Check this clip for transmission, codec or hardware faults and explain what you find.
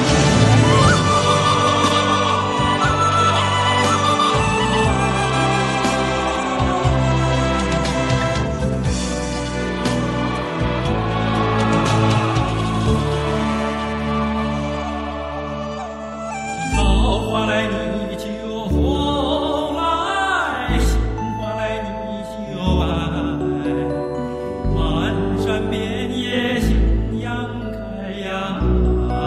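Listening through the clip turns up no faults to report. Nothing in the audio calls for comment at any point.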